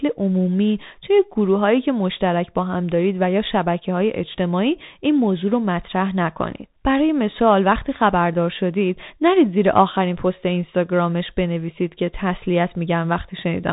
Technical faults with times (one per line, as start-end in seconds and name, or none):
0.00-13.72 Bluetooth CVSD headset codec